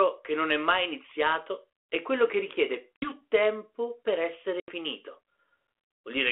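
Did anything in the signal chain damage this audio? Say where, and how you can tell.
Yes, in the network stage. This is packet loss on an ADPCM call. Hard-edged silent holes open at 2.96 to 3.13 s (60 ms missing) and 4.60 to 4.72 s (80 ms missing), a few packets each. The speech then resumes slightly distorted. The decoder's predictor and step size lost track of the sender's and take tens of milliseconds to recover. The narrow telephone band points to G.726 at 32 kbit/s.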